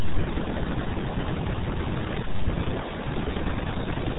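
The whole clip carries RealAudio 14.4 codec damage. Nothing passes above 3.8 kHz. The speech sounds muffled and gargly, which fits an 8 kbit/s stream.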